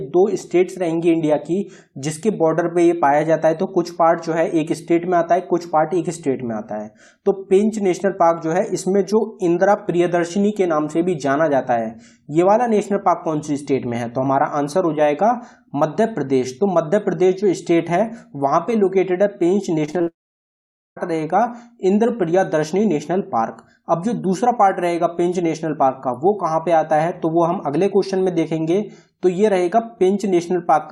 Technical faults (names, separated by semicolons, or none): repeated packet loss (robotic sound); long network dropout